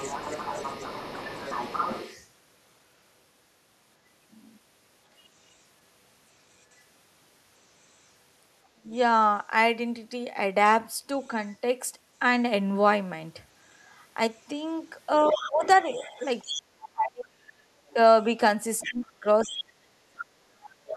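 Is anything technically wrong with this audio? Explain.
Yes, this speech clip has two echo-related faults.

The other side's voice leaks through at 0.00–2.27 s, 11.21–11.56 s, 15.32–16.88 s and 17.89–20.97 s. It is likely loudspeaker playback that the echo canceller left in the microphone signal. It sits about 10 to 15 dB under the talker, and is only faint at 11.21 s, about 35 dB down. On a spectrogram it shows as a second, weaker harmonic pattern beneath the main one.

Speech suppressed in double talk appears at 8.70–8.92 s, where the talker drops by about 25 dB for a fifth of a second. From 15.32 s to 20.96 s it recurs in pieces totalling around three seconds, with dips near 35 dB. This is likely the canceller muting everything while both sides spoke. The waveform shows sudden notches in the envelope, and the spectrogram shows gaps where the upper harmonics vanish.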